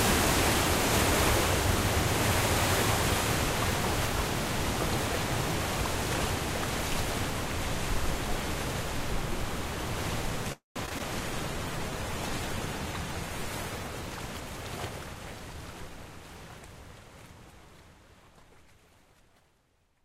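A call audio freeze at 10.52 to 10.78 s interrupts this recording of everyday sounds. For about a quarter of a second the last sound is stretched into a fading fill, about 140 ms of it near-silent, and then the audio resumes exactly where it stopped. That pattern of inserted time, around 234 ms of added delay with nothing lost, is what delayed packets leaving the jitter buffer empty would likely produce. Short concealed packet loss follows at 10.86 to 10.89 s, 10.89 to 10.92 s and 10.98 to 11.01 s. Each is a brief smear or wobble where roughly 20 ms of audio failed to reach the decoder, and the receiver papered over the hole by extending the preceding sound for about 9 to 17 ms before blending back into the real signal. A call bitrate drop then runs from 11.24 to 14.11 s. The sound turns coarse and muffled, with the top end dulled, which fits the encoder being pushed from around 96 kbps down to about 18 kbps after the bandwidth estimate collapsed, and it sits at that floor for about 2.8 s before clarity returns. 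Overlapping its end, a jitter buffer speed-up from 13.93 to 16.05 s makes the sounds run about 9 percent fast at unchanged pitch. The receiver, holding more audio than it aims for, trims small pitch-period slices repeatedly, removing roughly a fifth of a second in total to bring latency back down.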